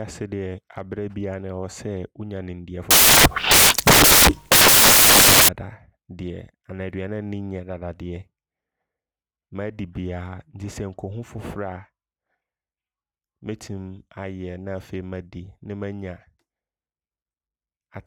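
From 2.91 to 5.49 s, just after "wonya nimdeɛ", the reader assembles samples from the wrong bytes, misaligned or swapped, so the rapidly changing low bits land in the high positions. The speech turns into loud, harsh broadband noise, close to white on the louder sounds.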